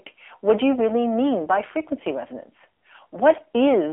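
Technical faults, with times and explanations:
Throughout, AMR narrowband mobile codec: the speech is confined to a telephone band of roughly 300 Hz to 3.4 kHz with nothing above 3.5 kHz, and it sounds plainly buzzy and synthetic, consistent with AMR-NB around 7.4 kbps rebuilding the voice from a vocal-tract model rather than merely filtering it.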